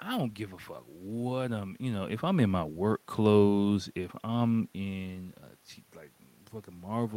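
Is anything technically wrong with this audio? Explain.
No, nothing is technically wrong with this audio.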